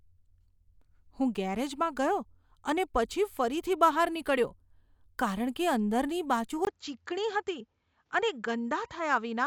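Input switched to a poorer device at 6.65 s, lasting to the end: after a brief 20 ms gap the speech loses everything above 7.6 kHz and gains a faint new noise floor while staying at a similar level, likely because recording moved to another microphone.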